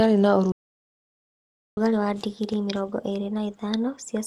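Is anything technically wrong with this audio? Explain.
Yes. From 0.52 s to 1.77 s the speech cuts out into about 1.25 s of silence before resuming. That is a playback stall, most likely the player running short of data or its thread being held up, so nothing reached the output until it recovered.

From 1.77 s to the end the speech runs audibly fast and sits roughly two semitones high. This is catch-up at higher speed: the player resamples its backlog at 1.15 times normal rate to recover the time lost in the stall, so speed and pitch rise together.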